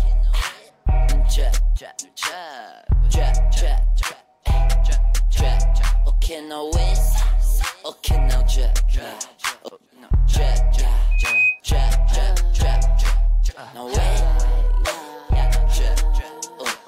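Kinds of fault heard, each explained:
Loudspeaker feedback squeal: a mic-to-speaker loop rings at 2.5 kHz, swelling over roughly a third of a second, ending near 11.6 s; spectrogram shows one bright horizontal line.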